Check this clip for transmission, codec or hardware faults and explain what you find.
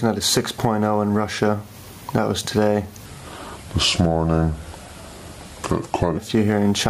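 Two faults are present: gain pumping across the whole clip, and a section at the wrong speed from 3.06 to 6.17 s.

Gain pumping runs throughout. The gain swings by about 15 dB, clamping down each time a loud sound arrives, so quiet and loud passages sit unnaturally close together and the audio feels squashed and breathing. This is likely input gain set far too high, with a fast limiter or compressor clamping down on each peak. On a waveform the envelope looks flattened against a ceiling; a spectrogram shows the level rising and falling in step with the louder events.

The section at the wrong speed runs from 3.06 to 6.17 s. It plays at 0.765 times its original rate, so it is both slower and lower, dropping by around five semitones, and it sounds dragged and deep against the surrounding audio. The likely cause is this stretch being played or fitted against the wrong clock. On a spectrogram every harmonic and formant band steps down and spreads out in time across that span, and the waveform's features appear stretched compared with the material on either side.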